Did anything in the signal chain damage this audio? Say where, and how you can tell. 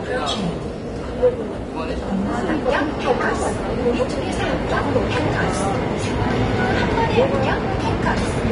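Yes, at the codec stage, throughout the clip: nothing is present above 10.6 kHz, a cut-off far too low for a high-bitrate MP3. This is likely low-bitrate audio saved at a high bitrate, probably a low-rate Vorbis-style encode re-encoded as MP3, which cannot restore the lost band.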